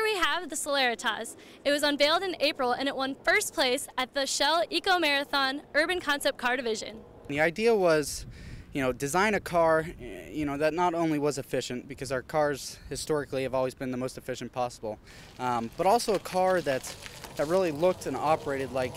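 No technical faults can be heard anywhere in this audio. There is no moment in the sound that marks a problem in how it was captured, processed or delivered.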